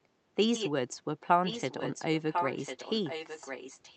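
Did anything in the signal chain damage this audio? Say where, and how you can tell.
Yes. Echo leak in call processing: a copy of the speech trails 1.05 s behind at 0.54–0.70 s and from 1.43 s on, likely from an echo canceller missing loudspeaker pickup.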